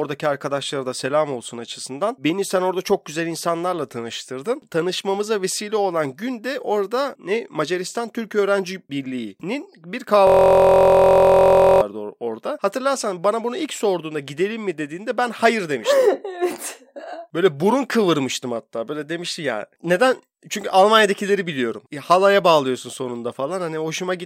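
From 10.27 s to 11.82 s the audio locks into a system hang loop: the host or driver stalled while the output hardware kept replaying the same stretch of its ring buffer. A single 23.22 ms fragment repeats about 66 times, which fits a 1024-sample buffer. Because the loop is so short, the speech gives way to a steady, rough buzz at about 43.1 Hz until playback resumes.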